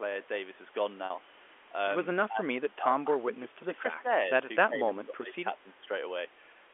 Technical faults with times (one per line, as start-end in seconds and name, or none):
1.06-1.10 packet loss with pitch repetition
2.28-4.08 speech suppressed in double talk
4.68-5.34 speech suppressed in double talk
5.63-5.89 speech suppressed in double talk